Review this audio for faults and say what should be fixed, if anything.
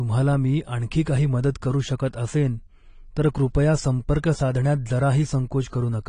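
Throughout, the audio sounds dull and smeared. The likely cause is AAC compression at a low bitrate, which fits about 32 kbps. Encode at a higher bitrate, or keep a lossless master for delivery.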